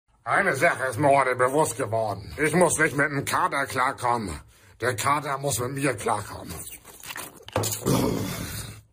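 No technical faults can be heard anywhere in this audio.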